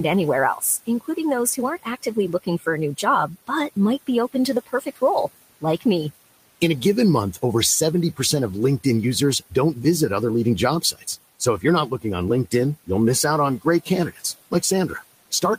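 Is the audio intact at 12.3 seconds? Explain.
Yes, at 12.3 seconds the speech is intact, with only the room's background noise, about 20 dB below the speech, heard beneath it.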